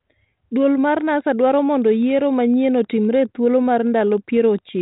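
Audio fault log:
0.97 to 4.81 s, Wi-Fi interference. A faint, steady ticking sits far below the speech, close to ten ticks a second. The ticks repeat every 102.4 ms, a Wi-Fi beacon interval. A nearby radio's bursts are rectified by the audio circuit into clicks.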